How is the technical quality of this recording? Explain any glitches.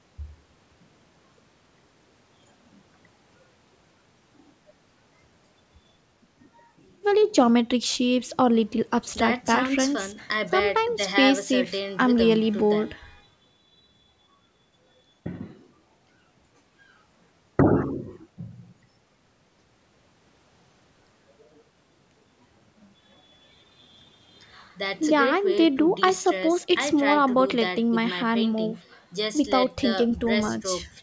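The technical quality of this speech recording is sound, with no glitches to explain, only the ordinary band limit of call microphone processing, which leaves nothing above 8 kHz.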